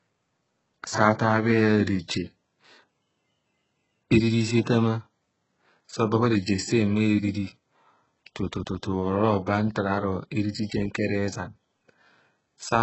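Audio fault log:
Throughout, HE-AAC compression: nothing survives above 8 kHz, and the treble sounds heavily synthetic, with gritty, lispy s sounds. That's likely band replication filling the top with copied lower bands that don't line up, at a bitrate around 8 kbps.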